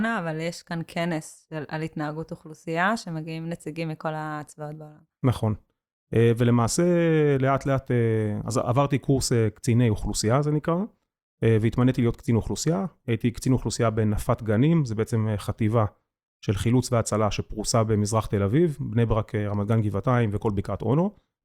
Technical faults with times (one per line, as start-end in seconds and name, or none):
none